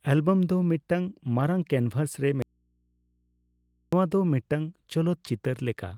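The speech cuts out abruptly at 2.42 s and returns just as suddenly at 3.93 s, leaving a gap of about 1.5 s that holds only a low mains hum, far beneath the speech at around 45 dB down. This is an audio dropout to a faint residue. The hard edges rule out a pause or fade. The signal was likely lost upstream while the following stage stayed live, so the open input picked up hum.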